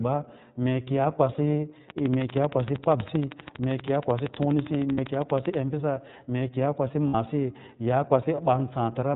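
Throughout the speech, the iLBC codec leaves a plainly audible mark. The band stops at 4 kHz, and the voice has a rough, slightly synthetic grain. Each frame's excitation is coded independently of its neighbours. The coarseness fits the 13.33 kbps mode with 30 ms frames.

Lost iLBC frames interrupt the speech twice, from 4.92 to 4.99 s and from 7.08 to 7.15 s. Each gap lasts about 60 ms, which is consistent with two consecutive 30 ms frames going missing. In each gap the decoder fills in by repeating the last pitch cycle blended with noise. The result is a brief held, buzzy vowel-like tone. Normal speech returns almost immediately after each gap because iLBC frames decode independently.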